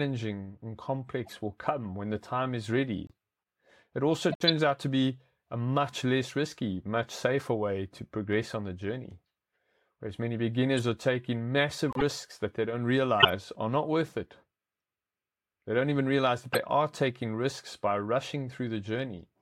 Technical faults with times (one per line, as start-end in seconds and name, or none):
1.25-1.33 corrupt frame decoded
3.07-3.11 corrupt frame decoded
4.29-4.49 corrupt frame decoded
10.77 corrupt frame decoded
11.89-12.02 corrupt frame decoded
13.20-13.29 corrupt frame decoded
16.53-16.58 corrupt frame decoded